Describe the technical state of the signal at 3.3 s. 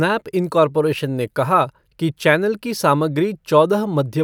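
At 3.3 s the speech signal is intact, with no audible technical fault at that moment.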